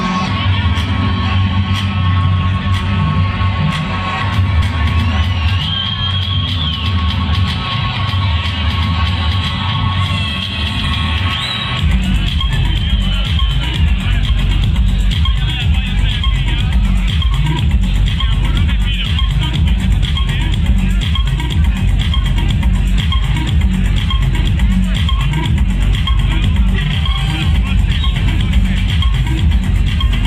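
Brief smeared blips at 4.61, 6.47, 10.83 and 14.28 s, each a small forward jump, mark compressed frames skipped. Whole 26.1 ms frames never played: roughly 70 ms lost first, about 100 ms thereafter. Overlapping neighbours blur each join instead of clicking.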